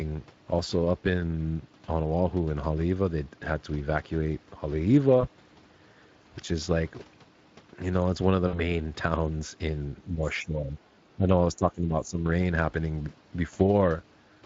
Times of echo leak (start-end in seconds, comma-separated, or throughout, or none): none